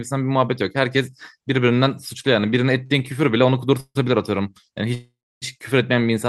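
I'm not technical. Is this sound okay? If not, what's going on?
No. There are two kinds of hiccup in this speech.

At 2.86 s there is a short stall from a late packet. One piece of the call arrived a little late, so the receiving side held the last sound for about 38 ms, just under 0.04 s, until it showed up. Nothing is lost. You hear a brief smear or slight buzz rather than a gap, and the speech then carries on slightly later than before.

At 3.80 to 3.97 s and again at 4.94 to 5.44 s there is a call audio freeze, likely from the connection holding up a run of packets. Each one starts like the stall, with the last sound dragging into a fading buzz. Unlike the stall, it lasts long enough to die away. The first ends in about 50 ms of silence, and the longer second one in about 280 ms. The speech then resumes where it stopped, with no words missing, only delayed.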